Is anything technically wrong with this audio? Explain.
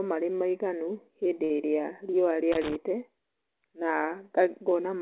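Yes, there are two faults. At 1.44 to 1.52 s, just after "marĩ maiganu hĩndĩ", there is a short stall from a late packet. The jitter buffer ran dry, so about 57 ms of the preceding sound is held, with a slight buzz or dip. Unlike a dropout, nothing is lost: the speech resumes exactly where it stopped. From 2.52 to 2.76 s there is loose connector crackle, an irregular burst of crackle or scratching as a contact rapidly makes and breaks. Unlike a packet stall, the sound is chopped rather than stretched. The call path's G.711 mu-law coding explains why nothing is heard above 4 kHz.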